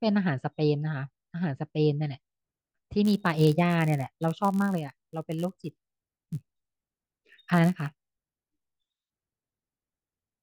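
From 3.05 s to the end of the clip the speech carries a filter restarted on every block. The filter discards its internal state at each block boundary and starts again from silence, so every block opens with a small transient. These repeat at 86.1 Hz, which fits a 512-sample buffer, and are heard as a steady buzz or rapid ticking laid over the speech, louder where the speech is louder and receding in quieter passages.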